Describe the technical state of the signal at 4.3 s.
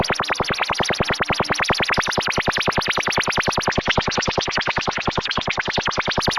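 At 4.3 s the signal sits inside a call bitrate drop that begins at 3.72 s and lasts to the end of the clip. The link's bandwidth estimate fell, so the encoder was starved of bits; the coarseness points to a rate in the low teens of kbps rather than the earlier 128 kbps. Audio bandwidth shrinks from 20 kHz to 8 kHz, so the sound turns muffled and rough, with a watery texture, bottoming out for about 1.7 s.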